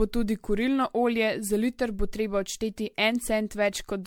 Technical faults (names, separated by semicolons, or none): generation loss